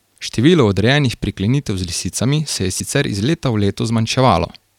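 At 2.77 to 2.80 s, just before "iz leta v", damaged data in the compressed stream throws the decoder off: it misreads the corrupted frames, loses sync and hunts for the next valid header, leaving a brief glitch of about 36 ms in the speech.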